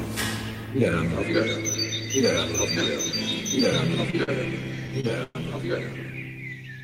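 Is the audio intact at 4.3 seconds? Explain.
No. From 4.23 to 4.30 s there is a short stall from a late packet: with the jitter buffer empty, the last sound was stretched by about 45 ms until the packet arrived, then playback resumed with nothing lost. It sounds like a brief held, slightly buzzy smear. On a spectrogram it shows as horizontally smeared, repeated bands; on the waveform, a short run of near-identical cycles.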